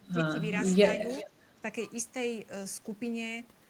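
From 0.0 to 0.37 s the speech sags in short pieces by up to about 15 dB. This is likely speech suppressed in double talk: with both ends active at once, the echo canceller could not separate the local talker from loudspeaker echo and turned both down. Unlike a packet dropout, the level dips rather than falling to silence.

From 1.17 to 1.27 s a faint copy of the speech comes back 379 ms late, roughly 15 dB below it. This is likely echo leak, where sound from a loudspeaker slipped past the canceller and was sent back. The single, clearly delayed repeat sets it apart from room reverberation, which smears continuously.

Overlapping its tail, from 1.25 to 1.65 s, the suppression returns, shallower this time at about 10 dB.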